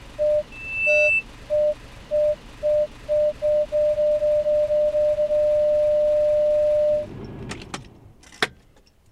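From 0.51 to 1.24 s there's loudspeaker feedback squeal: a 2.6 kHz tone swells over roughly 0.4 s, ending up a few dB above the sound.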